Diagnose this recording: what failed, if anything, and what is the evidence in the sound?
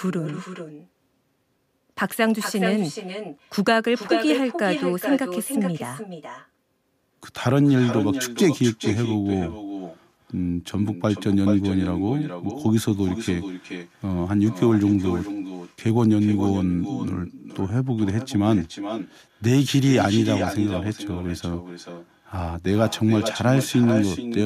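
Call processing failed: echo with no canceller. Throughout the speech, every phrase returns roughly 0.4 s later. The copy sits about 9 dB down and thinner. The far end's loudspeaker feeds its microphone. Nothing subtracts that return before it comes back.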